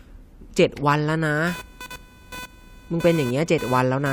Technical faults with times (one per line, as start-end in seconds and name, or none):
1.47-4.12 computer activity noise